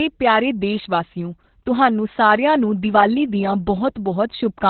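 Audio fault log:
throughout, Opus voice compression: heavily muffled, hoarse, slightly robotic speech with nothing above 4.2 kHz, which fits narrowband SILK coding near 8 kbps.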